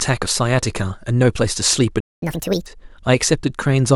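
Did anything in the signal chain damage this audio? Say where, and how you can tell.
Yes, in playback. A playback stall cuts the speech off at 2.00 s and leaves silence until 2.22 s, likely because the player's buffer ran dry or its thread was blocked. The waveform drops to a flat line, and the spectrogram shows a vertical gap.

Catch-up at higher speed follows from 2.22 to 2.66 s. The player resamples its backlog at 1.5 times speed, so speech sounds hurried and pitched up by about seven semitones. On the spectrogram, harmonics shift upward and syllables compress, then drop back.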